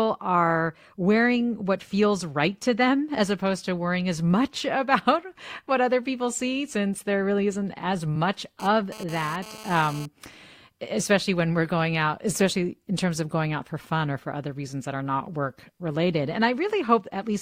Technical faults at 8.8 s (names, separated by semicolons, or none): GSM phone buzz